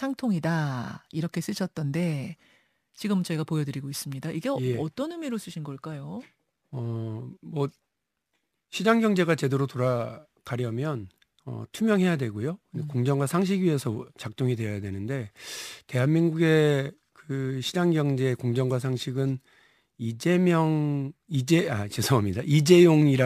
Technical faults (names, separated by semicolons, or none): crude rate conversion